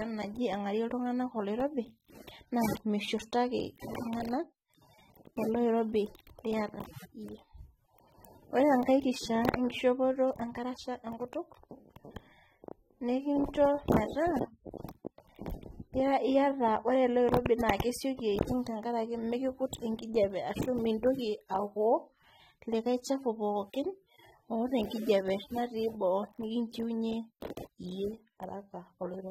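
Throughout, the speech sounds dull and smeared, with a fizzy warble on sibilants and nothing above 16.6 kHz. This is likely AAC compression at a low bitrate, around 24 kbps.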